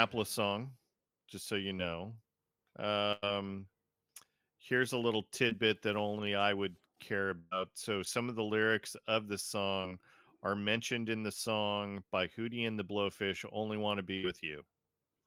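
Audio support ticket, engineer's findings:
Burst of packet loss at 3.12–3.34 s, 7.39–7.53 s, 14.17–14.25 s. Network path, receiver jitter buffer and concealment. Consecutive packets lost or late. Decoder extends the last sound and fades it over roughly 100 ms, 120 ms and 60 ms. Audio then resumes further on with that stretch gone. First event runs about 10 ms longer than the part it replaces.

Short concealed packet loss at 5.49–5.53 s and 9.81–9.85 s. Same path, single brief dropout. About 20 ms never reached the decoder in time. Gap filled by continuing the preceding sound, then crossfaded back into real audio. Heard as a brief smear or wobble. A short consonant may be swallowed at either point.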